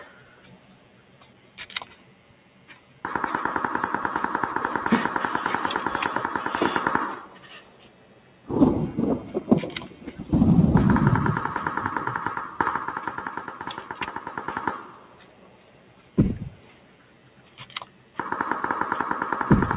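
A speech-tuned noise suppressor was left running on this non-speech audio, treating its steady tones and decaying tails as noise, so the level pumps and thins by around 10 dB while sudden attacks mostly pass. It cuts particular stretches harder, as sound cut by the noise suppressor, sinking held or fading sound by about 8 dB at 0.05–1.58 s, 1.85–3.04 s, 7.22–8.49 s, 13.37–16.17 s, 16.52–17.66 s and 17.85–18.18 s, and by about 6 dB at 9.89–10.24 s. The call path's band limit, with nothing above 4 kHz, fits G.711 mu-law coding at 64 kbps.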